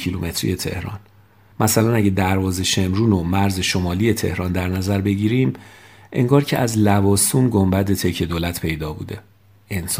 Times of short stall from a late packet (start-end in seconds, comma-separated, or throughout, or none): none